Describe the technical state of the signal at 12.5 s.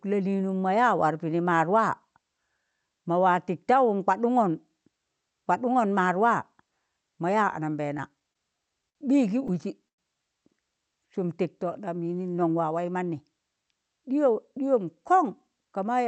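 At 12.5 s a jitter buffer speed-up is under way, from 12.34 to 13.21 s. Pitch-period slices are cut out repeatedly. Speech runs 109% fast, briefly hurried, losing about a tenth of a second.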